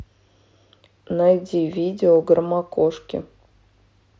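Speech clip carried over a Bluetooth mSBC headset link, with a single concealed Bluetooth headset packet loss at 2.15 s: about 7.5 ms, fitting one lost packet, is patched with repeated recent waveform, a barely audible blip seen as a tiny smeared seam in the waveform and spectrogram.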